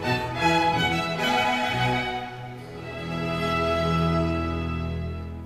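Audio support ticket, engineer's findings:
No fault found on listening to the music clip. No component flagged, no action required.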